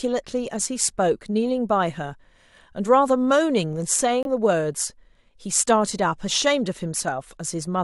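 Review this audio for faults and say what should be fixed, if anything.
At 4.23 to 4.26 s the speech drops abruptly into a 36 ms hole of silence, then resumes on time. This is a corrupt frame muted: flipped bits made the decoder reject a compressed frame, and the player substituted silence, a gap that fits a single frame. Protecting the stream with checksums and error correction, or using packet loss concealment instead of muting, would prevent this.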